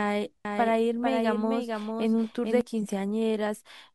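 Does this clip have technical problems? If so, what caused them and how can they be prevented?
Yes. From 0.45 s to 2.61 s the speech has a doubled audio track: a second, full-band copy runs about half a second behind the original and roughly 5 dB quieter, with no reverberant tail or room colour, and it starts and stops abruptly at those times. The likely cause is the same signal being captured again through a slower path and summed back in. Prevent it by routing each source through exactly one path to the mix.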